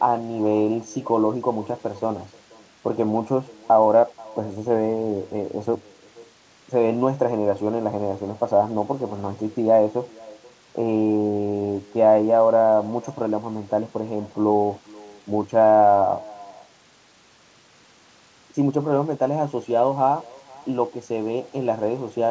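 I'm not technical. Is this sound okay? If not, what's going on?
No. An echo with no canceller runs through the whole clip. Every phrase returns as a faint, thin copy about half a second later, because the far end's speaker feeds its microphone.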